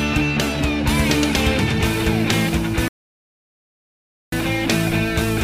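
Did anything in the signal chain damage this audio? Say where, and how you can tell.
Yes, a rebuffering stall at the playback stage: the sound drops to silence at 2.88 s and resumes at 4.32 s exactly where it stopped, adding 1.44 s. The player ran dry waiting for data. The waveform shows a flat gap, the spectrogram a blank band.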